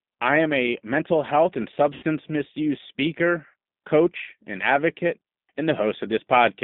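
G.729 codec damage runs through the whole clip. The speech is rebuilt from a vocal tract filter, a pitch predictor and a few pulses per frame at what sounds like 8 kbit/s, within a narrow 150 Hz to 3.7 kHz band, leaving it plainly rough and synthetic.

VoIP packet loss concealed by the speech codec appears at 1.94 to 2.04 s. About 80 ms of audio went missing, which fits four 20 ms packets. The decoder stretched its last pitch and filter into a buzzy tone or coloured noise that fades. At 3.50 to 3.54 s a shorter gap of about 40 ms gets the same treatment, and the sound stays weak briefly after each gap.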